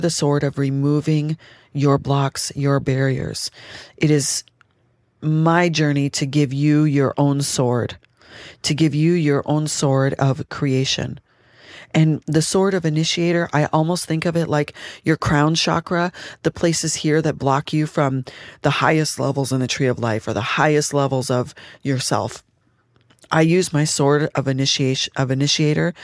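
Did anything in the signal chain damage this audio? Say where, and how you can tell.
No, nothing in the chain damaged this audio.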